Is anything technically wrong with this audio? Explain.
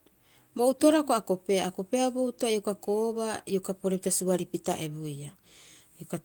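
No, nothing is technically wrong with this audio.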